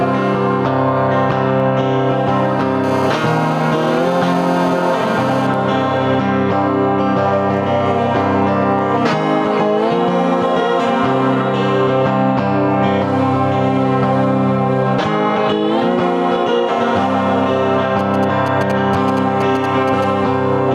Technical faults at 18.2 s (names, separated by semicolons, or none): gain pumping; GSM signalling bursts